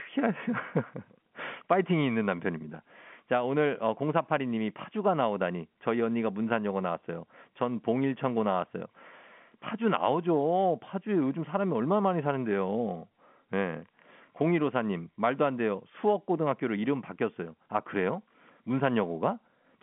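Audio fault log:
No faults found; the speech sits in a 150 Hz to 3.4 kHz telephone band with nothing above about 3.7 kHz, consistent with ordinary G.711 A-law telephone coding at 64 kbps.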